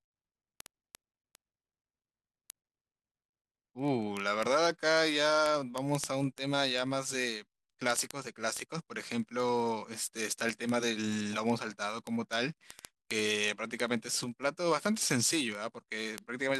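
Speech with word clock ticks from 0.12 to 16.58 s: steady sharp ticks about every 30 ms, unlike random clicks, from an unlocked digital link slipping a sample at roughly 700 ppm clock error.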